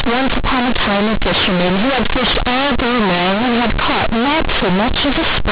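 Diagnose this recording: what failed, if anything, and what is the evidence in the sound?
Sample-format conversion failed: A-law companded audio read as linear 8-bit samples throughout the speech, giving loud buzzy distortion and heavy noise in pauses, with the 4 kHz telephone band intact.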